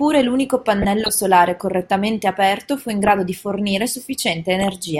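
DAB burbling occurs at 0.82–1.09 s, 2.90–3.13 s and 4.60–4.76 s: uncorrected bit errors corrupt MP2 sub-band data, producing short blips of noise in single sub-bands over the speech.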